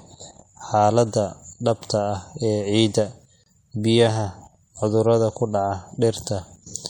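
From the start, the speech carries plainly audible MP3 compression, likely from encoding at a low bitrate, around 64 kbps. It sounds watery and swirly, with metallic chirps on s sounds. A spectrogram shows treble cut off flat, with scattered high-frequency specks flickering on and off.

At 3.44 to 3.46 s, just before "biyaha cudurrada ku", a gap at a join of encoded pieces drops in a gap of about 27 ms. Separately encoded segments were spliced without trimming the encoder's padding, so the speech stops and resumes mid-flow. The waveform shows a flat notch with smeared edges.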